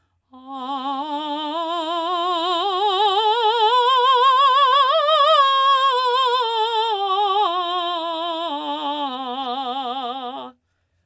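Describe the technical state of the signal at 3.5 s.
The music at 3.5 s is intact, having passed through call microphone processing that trims the lowest bass and carries nothing above 8 kHz, with no fault at that moment.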